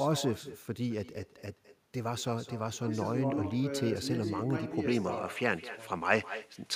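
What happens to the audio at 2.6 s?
At 2.6 s the speech carries echo with no canceller, as it does for the whole clip. Each syllable is followed by a fainter copy about a fifth of a second later. That copy sits about 16 dB below the direct speech. It sounds thinner. The far end is playing the call through a loudspeaker. Its microphone picks that sound up again. Nothing removes it, so it returns after the network round trip.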